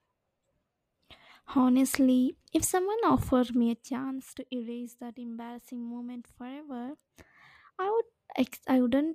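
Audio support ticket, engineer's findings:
Zipper noise, 3.32–4.44 s: fine ticking rides on the speech as the level drops roughly 15 dB. Gain stage stepping in 1 dB increments, around 30 steps a second, unsmoothed; each jump clicks.

Zipper noise, 6.6–7.4 s: same zipping as level climbs back roughly 15 dB. Same 1 dB steps at about 30 a second, likely per-buffer gain updates with no ramp between them.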